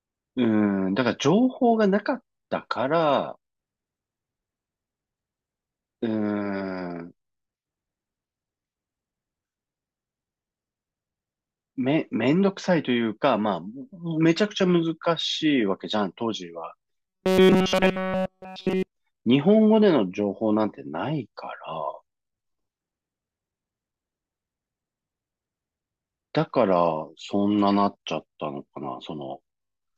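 From 17.09 to 18.88 s the speech turns into a rigid, metallic buzz locked at 188 Hz. It still follows the rough shape of the speech, but only roughly. This is robotic sound from repeated short buffers. The likely cause is new audio arriving too seldom, so playback keeps looping the last fragment and the real audio is skipped. A 188 Hz buzz fits a repeated buffer of about 5.3 ms.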